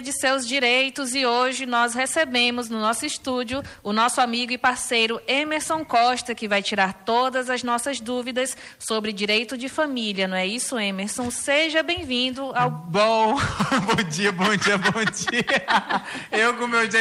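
Nothing goes wrong anywhere in this one; it just rolls along from the first moment to the last without a single hiccup worth pointing out.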